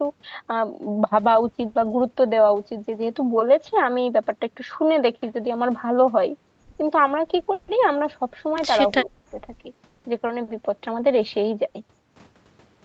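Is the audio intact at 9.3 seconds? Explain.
No. From 8.99 to 9.37 s the speech drops sharply, by roughly 30 dB. This is likely speech suppressed in double talk, with the echo canceller turning down this side's voice along with the loudspeaker echo.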